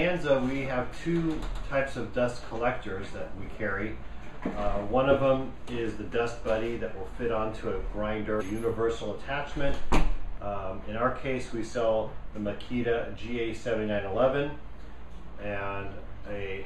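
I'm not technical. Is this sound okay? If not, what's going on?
No. Damaged data in a compressed stream causes brief glitches at 8.36 to 8.42 s and at 13.18 s, where the decoder misreads corrupted bytes and loses its place.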